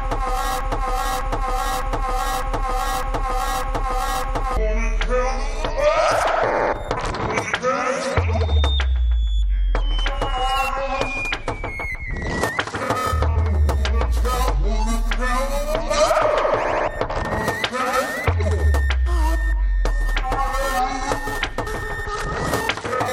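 A broken-record loop runs from the very start of the audio to 4.57 s, already under way when the clip begins: a 0.61 s fragment plays seven times in a row, each pass identical and joined back to back with no change. This likely comes from the player, encoder or stream stalling and resending the last piece it held, so whatever should have sounded during those first four and a half seconds is missing.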